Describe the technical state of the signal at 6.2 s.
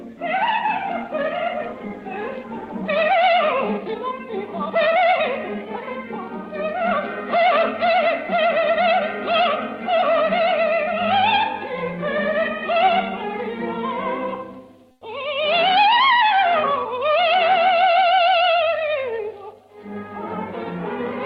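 At 6.2 s the signal is intact, with nothing more than the ordinary band-limited character of the call codec it passed through.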